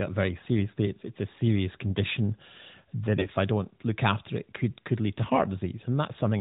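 AMR bit errors strike from 3.14 to 3.28 s, just before "I don't look after". Corrupted but unchecked frame bits, roughly one in ten, misplace excitation pulses and skew pitch, gain and spectral detail, so across about seven frames the narrowband voice turns hoarse, scratchy and gargly.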